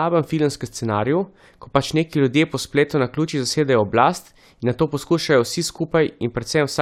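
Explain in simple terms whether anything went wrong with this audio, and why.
Nothing went wrong with this audio, as no fault can be heard anywhere in it.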